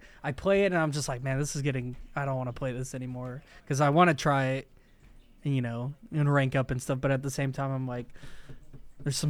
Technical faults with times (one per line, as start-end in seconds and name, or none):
none